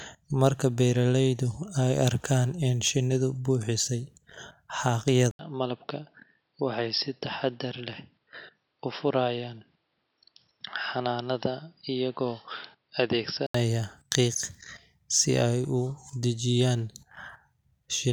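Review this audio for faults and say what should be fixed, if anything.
From 5.31 to 13.54 s the speech turns dull and boxy, with nothing above 5.5 kHz, a brief 80 ms silence at the switch, a level drop of a few decibels and a faint new noise floor. This is likely an input switched to a poorer device. A simple low-pass filter would not bring the gap or the changed background noise. Pinning the recording input to one fixed device prevents this.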